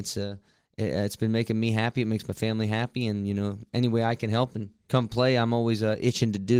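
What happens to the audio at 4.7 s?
Nothing goes wrong at 4.7 s: the speech continues intact through that moment, carrying only the same light Opus voice compression heard elsewhere.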